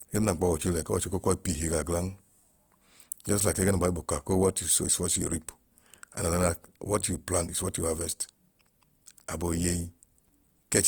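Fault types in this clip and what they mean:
Opus compression: The speech was likely encoded with Opus in its music mode at a bitrate the sound puts near 24 kbps. Short of bits, bands are filled with folded or noisy content, so the voice sounds grainy and rough throughout, though bandwidth still reaches 20.2 kHz.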